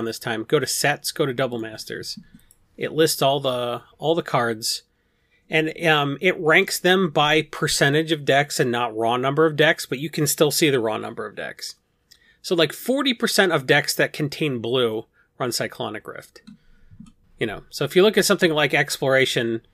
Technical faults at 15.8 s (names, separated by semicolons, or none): none